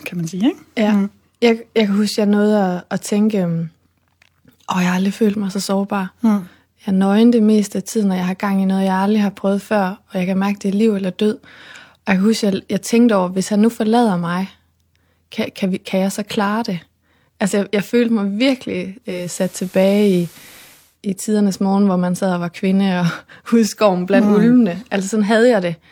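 At 19.01 s, right after "jeg følte mig virkelig", the speech shows digital radio blending to analogue. The receiver lost the digital stream and cross-faded to FM over 401 ms. Hiss rises to roughly 30 dB below the signal and level shifts about 2 dB. It returns to digital at 20.98 s, before "i tidernes morgen hvor".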